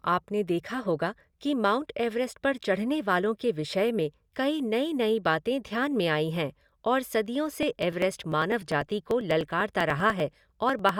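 Periodic USB or driver dropouts from 7.53 to 10.89 s: about a millisecond of speech skipped every 0.099 s, heard as regular ticks while sound plays.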